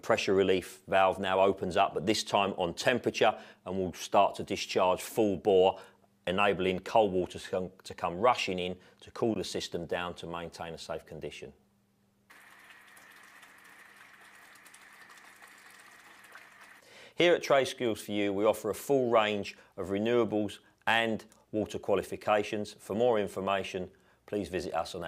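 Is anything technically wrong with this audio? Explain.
Yes. At 9.34 s the sound drops out abruptly into a short, hard-edged hole of silence, roughly 16 ms long, with clean cuts at both ends. This is a gap between stream segments. The time stamps of two adjoining segments, which fit a segment length of 4 s, leave a small space between them, and the player fills it with silence. Nothing is missing from the sound itself; the silence is inserted, stretching the timeline by about 16 ms.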